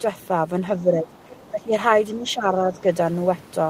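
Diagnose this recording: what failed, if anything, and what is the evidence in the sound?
The call processing stage is at fault. The speech is suppressed in double talk three times: 0.82–1.13 s, 1.51–1.73 s and 2.16–2.86 s, each dipping by about 10 dB. The likely cause is the echo canceller treating overlapping talk as echo and pulling everything down.

Between 1.13 and 1.51 s, the other side's voice is leaking through. It's a faint second voice, sitting about 25 dB under the main speech. It's likely residual loudspeaker echo that the canceller didn't fully remove from the microphone signal.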